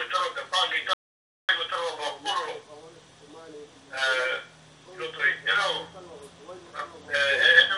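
An audio dropout to silence runs from 0.93 to 1.49 s, most likely because the input was briefly lost while the recorder kept writing silence. The sound cuts off abruptly, leaving about 0.55 s of dead silence with no room tone, then resumes mid-flow.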